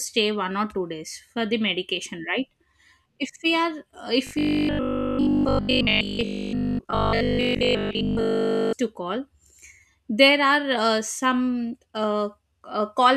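From 4.27 s to 8.77 s the speech collapses into robotic sound from repeated short buffers. Essentially all of that stretch is made of a 20 ms slice played over and over, which imposes a fixed 50 Hz buzz, most likely because new audio stopped arriving in time. It sounds rigid and metallic while loosely tracking the syllables. On a spectrogram, evenly spaced 50 Hz harmonic lines replace the natural pitch contour; the waveform shows identical 20 ms cycles.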